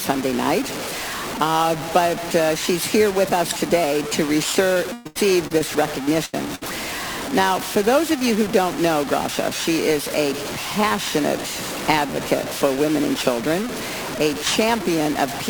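The whole audio carries a grainy, signal-following distortion, with noise only about 10 dB below the signal, so quiet passages turn gritty and sputter. This is low bit depth without dither, likely truncation to around 5 bits, where the rounding error tracks the waveform instead of sitting as a steady hiss. Periodic clock jitter also runs throughout, at a rate of around 2 kHz. It puts sidebands at that spacing on either side of every component, which gives the sound a rough, metallic edge that grows on higher content and disappears in silence. From 4.73 to 5.69 s there is repeated packet loss, which sounds choppy and robotic. Five gaps account for about 30 % of that span, the longest 117 ms, and each is patched by stretching out the preceding sound before the next dropout arrives. Two short bursts of packet loss follow, at 6.25 to 6.35 s and at 6.55 to 6.63 s, removing about 80 ms and 60 ms of audio. 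In each, the last sound is extended and faded out, and playback then resumes with that section missing.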